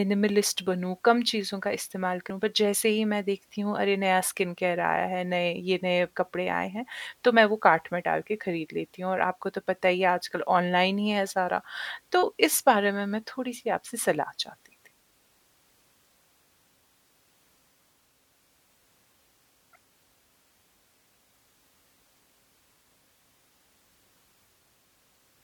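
At 2.30 s the speech jumps ahead abruptly, as if a short piece of it, roughly a tenth of a second, has been cut out, leaving a small discontinuity at the join. This is compressed frames skipped: whole frames of the encoded stream were never played, either because they were missing from the file or because the decoder rejected them as damaged, so playback resumed from the next frame it could use.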